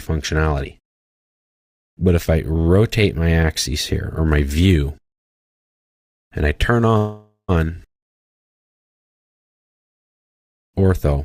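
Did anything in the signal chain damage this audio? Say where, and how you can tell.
Yes, there's a call audio freeze at 6.97 to 7.51 s, and it's a network-stage problem. The sound just before it gets stretched into a fading buzzy tail for about half a second, with the last 110 ms or so going silent. Then the audio picks up exactly where it left off, so nothing is lost; everything after is simply pushed about 0.51 s later. That's the likely signature of delayed packets draining the jitter buffer while the receiver filled the gap.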